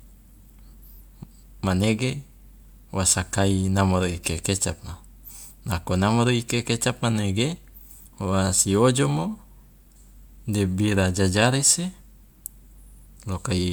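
No technical faults are audible.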